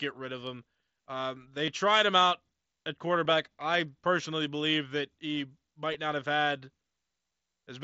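Concealed Bluetooth headset packet loss hits three times. At 1.66 s, just before "tried him out at", 15 ms of audio went missing, which fits two lost frames. At 3.24 s, after "tried him out at" and before "I personally believe that", the gap is 7.5 ms, and at 5.94 s, between "personally believe that he" and "not have had", it is another 7.5 ms. Each of those shorter gaps points to a single lost frame. In each case the receiver patched the gap by repeating the best-matching recent stretch of waveform, so the single losses are almost hidden. On a waveform the patch looks like a short duplicated cycle, and on a spectrogram like a thin, slightly smeared vertical seam.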